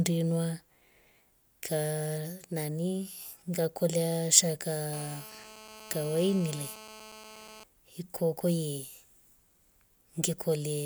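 GSM phone buzz cuts into this speech clip from 4.93 s to 7.64 s: a hard, raspy buzz near 217 Hz, rich in harmonics, sitting about 18 dB below the speech and having nothing to do with it. A 2G handset close to the recording chain sends its radio bursts about 217 times a second, and the audio circuitry rectifies those pulses into an audible tone. The buzz stays nearly steady, as a phone does during a call.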